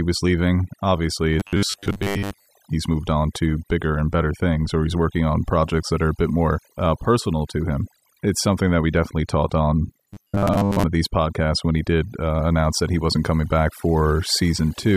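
The whole speech clip suffers from overdone noise removal: the noise reduction was pushed so hard that bands near its noise estimate get cut right out, taking quiet parts of the voice with them. The background drops and breaks up into twinkly specks.

From 1.40 to 2.50 s, just before "he's moved on to", and again from 10.10 to 10.84 s, between "we definitely taught on" and "of these podcasts when", there's robotic sound from repeated short buffers. It's a rigid metallic buzz at 100 Hz, likely from the same 10 ms chunk being replayed in place of most of the real audio.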